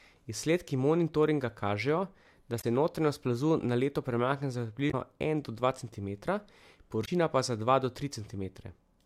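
Damaged data in the compressed stream produces three brief glitches in this speech, at 2.58–2.64 s after "monitoringa kažejo da", at 4.87–4.94 s after "na leto premakne za", and at 7.02–7.09 s. Each time, corrupted bytes made the decoder misread frames and lose sync until it found the next valid header.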